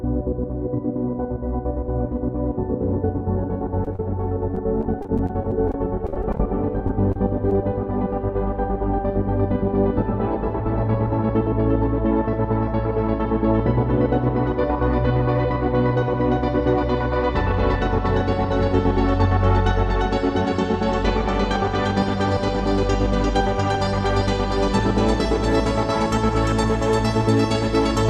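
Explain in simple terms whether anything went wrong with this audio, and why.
Short concealed packet loss occurs at 3.84–3.87, 3.93–3.96, 3.96–3.99, 6.88, 7.12–7.16 and 7.50–7.52 seconds. Tiny pieces of audio, 10 to 30 milliseconds each, arrived too late, so the receiver stretched the preceding sound to cover each hole. You hear brief smears or wobbles.

Repeated packet loss (robotic sound) runs from 4.55 to 6.40 seconds. Nineteen small holes, none longer than about 30 milliseconds, were each patched by continuing the last sound. They add up to a quarter second of missing audio, leaving a choppy stretch.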